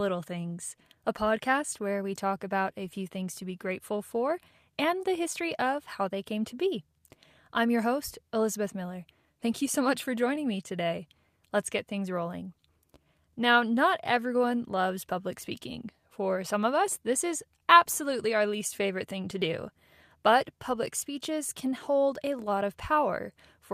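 Right through the speech there's clock drift between sender and receiver: the sending end's clock runs about 2% slow, so the receiving buffer keeps draining. The whole thing has a faintly dragging, slightly off-kilter pace.

From about 0.06 s to the end at 23.7 s you get repeated timing corrections, where the receiver stretches things out by repeating short slivers to keep up. Playback runs at roughly 98% speed, adding around half a second overall, heard as small, unevenly spaced hiccups and a wobbly tempo.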